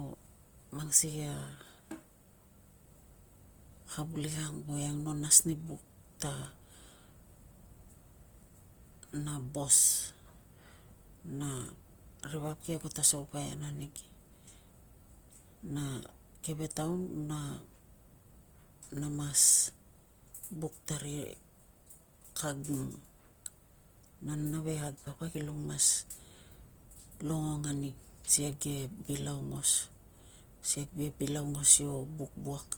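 Opus compression, throughout the speech, is the likely cause of the plainly audible damage. Each band's energy is kept, but with too few bits the fine detail is filled by folding lower bands or by noise, so tones turn rough and grainy, fitting roughly 24 kbps, with content reaching 20.1 kHz.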